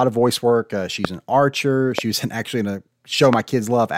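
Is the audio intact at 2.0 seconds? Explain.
No. A loud pop runs from 1.99 to 2.01 s, right after "an archer" and before "was in actually in". A single voltage pulse, likely from a plug, switch or static discharge, was added to the signal. It is heard as one sharp pop standing well above the speech, which carries on underneath.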